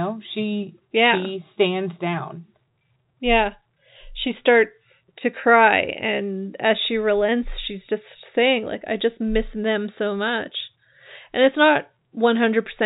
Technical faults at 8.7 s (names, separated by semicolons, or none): none